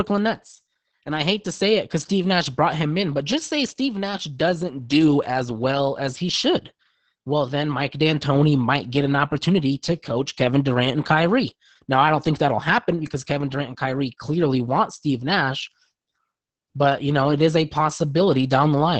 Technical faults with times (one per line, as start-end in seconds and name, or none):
0.00-19.00 Opus voice compression